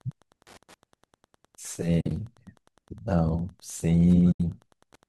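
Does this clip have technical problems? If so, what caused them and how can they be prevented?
Yes. Wi-Fi interference runs throughout as faint ticking about ten times a second. This fits a nearby radio's beacon every 102.4 ms being rectified by the audio circuit. Unlike mains hum, it is a regular click train rather than a steady tone. Moving the Wi-Fi radio away from the audio wiring and using shielded cables prevents it.

AAC frame loss with muting leaves two soft-edged holes in the speech. The first, from 2.01 to 2.11 s, is broken, with about 70 ms lost over 100 ms and the longest gap around 50 ms. The second is a single 80 ms hole from 4.32 to 4.40 s. The speech fades out and back in, which sets it apart from a hard dropout. The cause is likely a low-delay AAC stream losing frames in transit. A more reliable network link or error concealment in the decoder prevents it.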